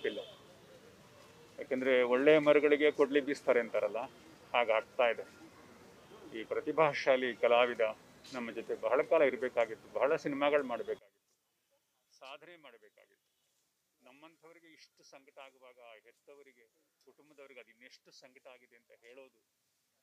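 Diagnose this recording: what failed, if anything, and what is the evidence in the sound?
From 10.99 s onward, the sound drops by about 27 dB. A phase-inverted channel cancelling in mono, likely from reversed analogue wiring, explains it.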